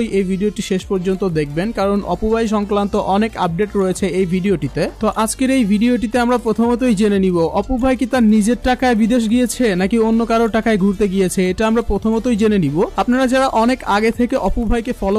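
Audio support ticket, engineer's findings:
Nothing stood out on listening, and no fault was found to attach to any component.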